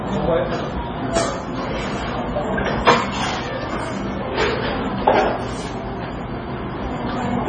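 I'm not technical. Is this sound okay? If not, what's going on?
No. From start to finish the sound has a dull, muffled top. Nothing is heard above about 9.4 kHz, so crisp, airy detail is missing. The damage is heavy. Quieter parts seem to flicker in and out, which gives a watery, swirly quality. Sharp, hissy moments can turn metallic and chirpy, and sudden hits lose their snap. The likely cause is strong MP3 compression, which throws away high frequencies and faint detail to make the file small.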